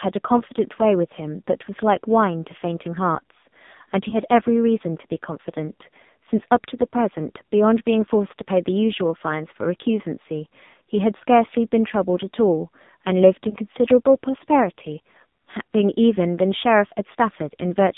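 From start to finish the speech passes through the AMR narrowband mobile codec. Nothing sits above about 3.7 kHz or below 150 Hz, and the voice has a buzzy, synthetic edge. That edge comes from the codec rebuilding speech from a vocal-tract model driven by sparse pulses, and the heavy damage fits a low rate near 5.9 kbps. A plain band-limiting filter would narrow the sound without that artificial buzz.

At 4.10 to 4.19 s and again at 13.50 to 13.56 s there are lost AMR speech frames. Each sounds like a single missing 20 ms frame. The decoder fills it by repeating the last good pitch and vocal-tract settings at reduced gain, giving a brief dip or warble, and the voice resumes a little rough. A true dropout would cut to dead silence or a click. Here the sound smears briefly instead of stopping.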